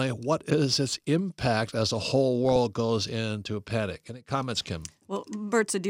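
Two short patches of DAB burbling in the speech, at 2.45 to 2.56 s and 4.55 to 4.69 s. Weak reception is letting bit errors slip past correction into the MP2 data, so wrong samples put short blips of noise into individual sub-bands.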